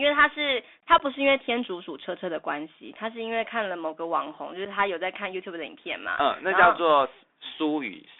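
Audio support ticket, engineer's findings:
Bluetooth CVSD headset codec, whole clip: speech squeezed into roughly 250 Hz to 3.6 kHz, scratchy s sounds, grainy hiss underneath. The one-bit delta stepping can't track loud highs, which fits a 64 kbps CVSD link.

Unconcealed Bluetooth headset packet loss, 0.98 to 1.01 s and again at 4.65 s: abrupt holes of about 15 ms and 7.5 ms. A couple of packets, then one, dropped and never patched over.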